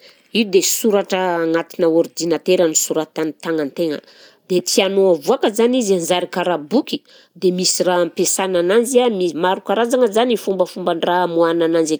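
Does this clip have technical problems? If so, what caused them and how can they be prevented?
No, there are no technical faults to hear in this speech recording. Since nothing has gone wrong, there is nothing to prevent.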